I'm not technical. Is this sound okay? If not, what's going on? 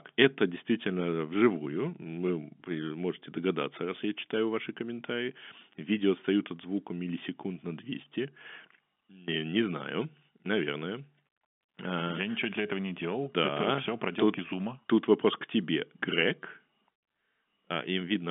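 Yes, no faults are present.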